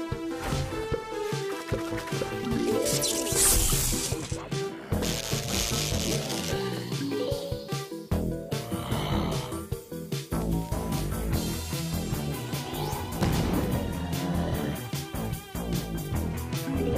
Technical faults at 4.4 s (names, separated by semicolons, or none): none